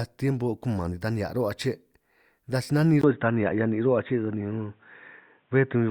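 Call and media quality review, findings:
Input switched to a poorer device, 3.01 s to end, after "taj si nanin". Brief gap of about 20 ms, then speech goes dull and boxy, with nothing above 3.8 kHz. Level shifts by a few dB and a new faint background noise appears. Likely a mid-call switch to another microphone or a headset call profile, whose narrower band and different gain and noise replace the original input path.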